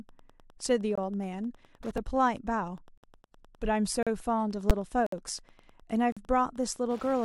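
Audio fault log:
Throughout: Wi-Fi interference. A faint, steady ticking roughly 30 dB below the speech repeats every 102.4 ms, about ten times a second, as a nearby radio's beacon is rectified in the circuit. The fixed rhythm distinguishes it from random crackle or mains hum.
0.95–0.98 s, 1.97 s, 2.98–3.03 s, 4.03–4.07 s, 5.06–5.12 s, 6.12–6.17 s: gap between stream segments. Hard-edged silences from 3.1 to 59.2 ms fall about once a second, at the joins of 1-second segments where mismatched time stamps leave a hole. The speech resumes intact, unlike a dropout, which loses audio.
4.70 s: invalid numbers at full scale. A 10 ms block of invalid values was pinned flat at one extreme value and is heard as a single very loud bang rather than a pop at each end. Its extreme level and flat, toneless character set it apart from an ordinary click.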